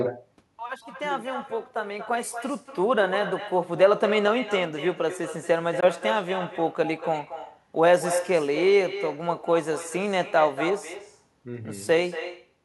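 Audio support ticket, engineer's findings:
Echo with no canceller on the speech throughout: quieter, thinner copy trailing each phrase by about a fifth of a second, about 11 dB down. Far-end speaker bleeding into their mic, nothing cancelling it.

Brief hard gap 5.80 to 5.86 s, speech picks up later as if it kept playing. Likely a Bluetooth dropout, with late packets skipped, which fits a single lost frame.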